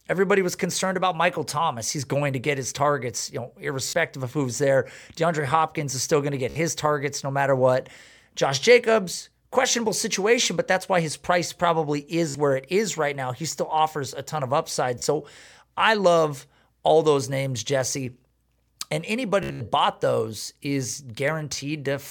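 Bluetooth stutter hits this speech at 3.89 s (after "his targets you know"), 6.50 s, 12.29 s (after "why his price probably"), 15.0 s and 19.43 to 19.61 s (before "bought those is"). Late packets make the receiver replay its last slice, giving a brief buzzy repeat, longest and choppiest in that final stretch.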